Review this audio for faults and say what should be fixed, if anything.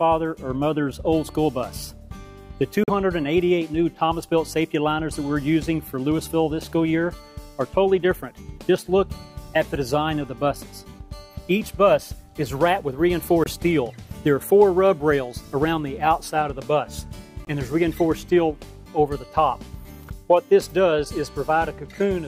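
Three short silences, at 2.84–2.90 s, 13.44–13.48 s and 17.45–17.48 s, point to a likely Bluetooth dropout. Late packets were discarded, so the output went silent and resumed further on, skipping about 43, 21 and 21 ms, which fits two, one and one lost frames. A waveform shows flat gaps; a spectrogram shows thin vertical blank columns. Keeping the headphones close, with a clear path and less 2.4 GHz interference, prevents this.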